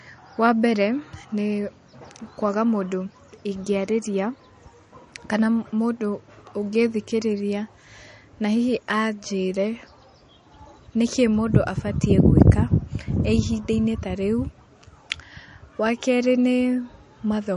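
Throughout, the speech sounds watery and swirly, with nothing above about 10.6 kHz and plainly audible metallic chirps on s sounds. This is likely MP3 compression at a low bitrate, around 40 kbps, where the encoder drops the treble and switches weak frequency lines on and off between frames.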